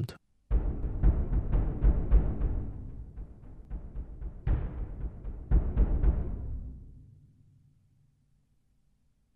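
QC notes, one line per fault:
0.83–3.65 s, doubled audio track: the same signal is most likely being captured a second time through a slower path, so a full-band copy lands roughly 300 ms behind the original at about 5 dB lower. Because the copy carries no decay or room colour, it reads as a crisp, detached repeat rather than reverb, doubling every onset as a distinct echo. It cuts in abruptly at 0.83 s and drops out just as suddenly at 3.65 s.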